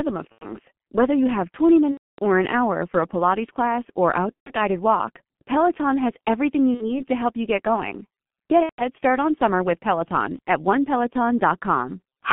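Throughout, the G.723.1 codec at about 6.3 kbit/s confines the speech to roughly 150 Hz to 3.4 kHz and heavily smears it. Slow, coarse frame-by-frame modelling makes it hoarse with blurred consonants, unlike a simple low-pass filter, which would only dull the sound.

VoIP packet loss concealed by the speech codec then breaks in at 0.33–0.46 s, 1.92–2.19 s before "or an hour for", 4.36–4.53 s between "class or" and "guided walk", 6.74–7.01 s between "has everything you" and "to help you get", and 8.63–8.84 s. Each gap becomes a buzzy, fading smear that goes silent wherever three or more frames in a row are lost, and the voice stays weak just after. The longest, at 1.92 s, fits about 270 ms of missing audio.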